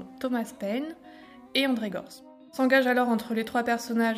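Nothing is technically wrong with this audio.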